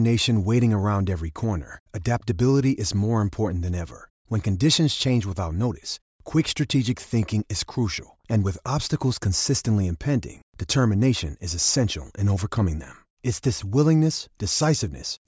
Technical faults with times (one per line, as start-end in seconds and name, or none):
none